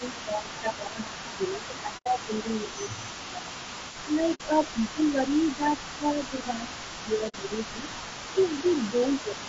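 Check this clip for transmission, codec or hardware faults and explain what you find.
Four kinds of fault are audible: codec degradation across the whole clip, an echo that never fully clears, repeated ducking of the talker during double talk, and three brief muted dropouts.

Low-delay AAC compression runs throughout. The likely cause is AAC-ELD, the video-call codec, at a bitrate that sounds like about 32 kbps. Its short frames resolve pitch harmonics poorly at that rate, so the speech is plainly rough and grainy, with noise filling the gaps between harmonics.

An echo leak is present from 0 to 9.48 s. The far end's echo canceller likely failed to remove all the loudspeaker sound its microphone picked up, and the residue was sent back. It comes through as a copy of the speech delayed by 326 ms and about 20 dB quieter.

Speech suppressed in double talk occurs from 0.0 to 3.55 s, 4.03 to 7.91 s and 8.33 to 9.38 s. 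The echo canceller likely could not separate the talker from the echo while both sides spoke, so it turned everything down. The speech dips by up to about 15 dB in the first stretch and about 10 dB in the later two.

AAC frame loss with muting occurs at 1.97 to 2.07 s, 4.34 to 4.41 s and 7.28 to 7.35 s. Frames were lost, and the decoder zeroed their spectrum. The overlapping windows fade the sound out and back in, leaving soft-edged holes of about 90, 60 and 60 ms. Those lengths fit three, two and two lost frames.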